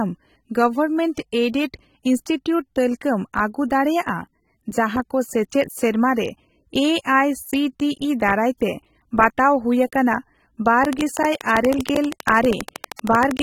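Throughout, the speech has plainly audible AAC compression damage, likely from AAC-LC at a low bitrate near 27 kbps. Nothing remains above 19.4 kHz.

At 1.15 to 1.17 s, pre-echo smears an attack. Codec noise spreads about 26 ms ahead of it as a short hiss.

From 10.85 to 13.40 s, a train of clicks ticks regularly at 12.6 per second. There are about thirty, roughly 15 dB above the speech, likely from interference or a faulty connection.

At 12.96 to 12.99 s, pre-echo returns. A hiss spreads about 30 ms before an attack and softens it.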